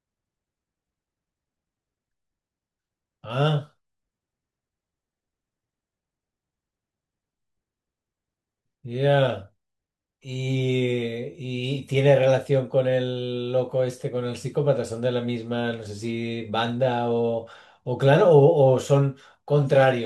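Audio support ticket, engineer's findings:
No audible faults found on this speech recording.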